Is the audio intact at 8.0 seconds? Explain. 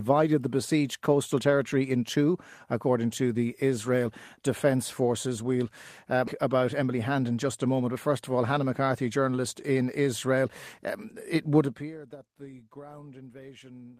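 No. Right up to 7.96 s the speech sounds hurried, running about 10% fast at unchanged pitch, before "first of all". This is a jitter buffer speed-up from 6.47 s: after a backlog built up, the receiver cut many pitch-period-sized slivers, about 150 ms in all, to catch up.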